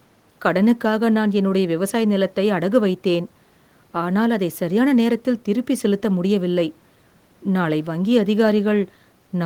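No technical faults can be heard anywhere in the recording. There is nothing to place in time or trace to a cause.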